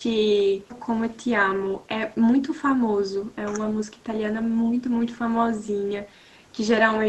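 Speech suppressed in double talk at 0.39–0.87 s, 3.66–3.8 s and 3.97–4.05 s: the speech dips by about 10 dB, then about 5 dB, likely from an echo canceller turning it down while the far end also spoke.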